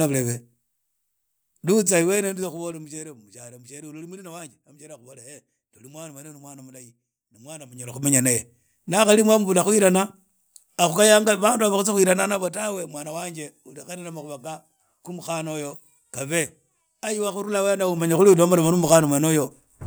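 Zipper noise occurs three times. The gain moves in unsmoothed 2 dB steps, and each step clicks. From 1.67 to 3.07 s it falls about 20 dB, ticking roughly seven times a second. From 7.71 to 8.08 s, just before "naye na hari", it climbs about 20 dB in a fast zip. From 17.74 to 18.20 s it rises about 10 dB.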